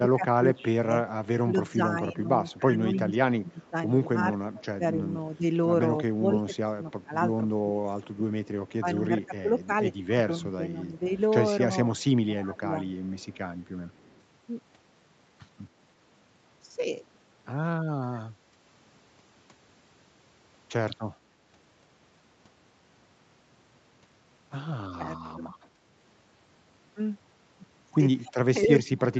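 From the start to 12.76 s the speech keeps dipping, losing its top end and breaking into pieces, about 4 s in total, with drops as deep as about 15 dB. This is speech suppressed in double talk. The likely cause is an echo canceller that could not tell this talker from loudspeaker echo while the far side was also speaking, so it turned both down.

Starting within that stretch, a faint delayed copy of the voice played on the loudspeaker comes back about 0.28 s later. It appears briefly at 0.6 s at about 25 dB below the speech, again from 2.5 to 3.7 s at about 20 dB down, and from 8.46 to 14.2 s at about 30 dB down. This is echo leak. The likely cause is one side playing the call on a loudspeaker, where the canceller let part of its microphone pickup return.

Shorter suppression dips follow at 18.1 to 18.25 s and 24.96 to 25.47 s, each reaching about 15 dB. From 28.25 s to the end the drop is much deeper, about 30 dB. 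Inside that last stretch, from 28.63 to 29.0 s, the echo comes back much louder, only about 10 dB below the speech.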